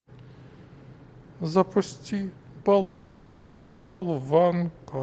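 At 2.81 s, packets were likely held up on the network and the jitter buffer ran dry, causing a call audio freeze. For about 1.2 s, until 4.03 s, the receiver fills the gap by stretching the last sound into a fading buzz-like hiss that never drops to true silence. When the packets arrive, the speech resumes exactly where it stopped, so nothing is lost but everything after is 1.2 s late. The call path's bandwidth is capped at about 8 kHz.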